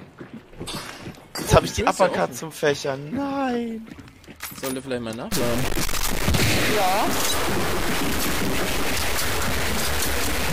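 From 5.32 s to the end of the clip, the sound turns harsh and buzzy, with coarse distortion riding on everything and a hiss-like noise filling the quieter stretches. This is likely a stuck bit: one bit of each sample is held fixed, so roughly half the values are pushed off by that bit's weight, a step of about -20 dBFS. Because the error flips with the waveform's sign near zero, even low passages carry the added noise.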